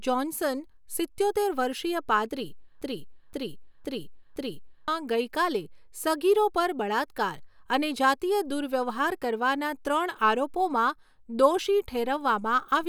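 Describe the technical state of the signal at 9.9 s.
The audio is intact at 9.9 s, with no fault audible at that moment.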